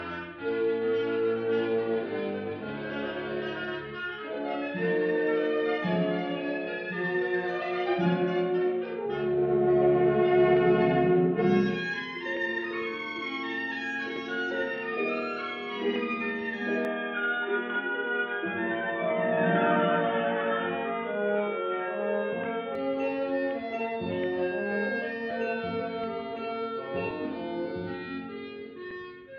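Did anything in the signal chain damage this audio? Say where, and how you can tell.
Yes. At the capture stage, the input most likely switched to a poorer device from 16.85 to 22.75 s: the sound abruptly turns dull and boxy, with nothing above 3.8 kHz, a new noise floor well below the signal, no gap and no obvious level jump.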